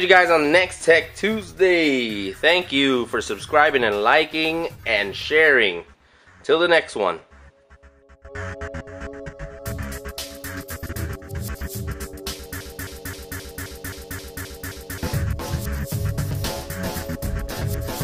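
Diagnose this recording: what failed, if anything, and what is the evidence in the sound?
From 12.61 s to 15.03 s, one fragment about 0.26 s long repeats exactly, back to back, nine times: a broken-record loop. The player or stream buffer likely stalled and kept re-sending its last held fragment, so the audio due in that span is lost.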